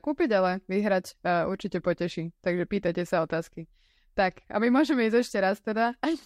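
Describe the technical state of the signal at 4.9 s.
At 4.9 s the speech signal is intact, with no audible fault at that moment.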